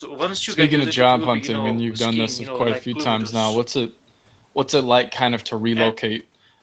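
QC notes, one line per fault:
No faults to note for this speech clip.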